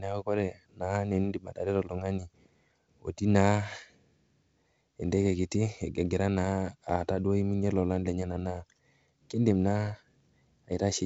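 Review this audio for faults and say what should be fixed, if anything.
There's a bit error spike at 10.72 s, near the very end of the speech: one sharp tick that jumps out of nowhere and has nothing to do with what's being said. It's a single corrupted sample, a flipped bit that throws the value off by a power of two before it snaps straight back, so the click spreads across the spectrum, up to where the G.722 coding tops out around 7.7 kHz. To prevent it, check the memory and the digital link carrying the stream for errors, and add error detection so a bad sample gets caught or concealed.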